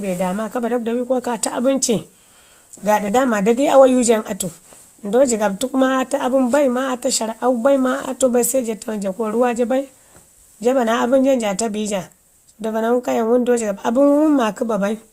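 Just before "daama dadai awayu", from 3.07 to 3.09 s, the speech is hit by lost LE Audio frames. The gap of about 15 ms fits two missing 7.5 ms frames, likely from an LC3 stream over Bluetooth. The decoder fills the gap by replaying the last spectrum with scrambled phase. What you hear is a brief noisy smear rather than a hard dropout to silence or a sharp click, because the gap is patched with texture instead of left empty.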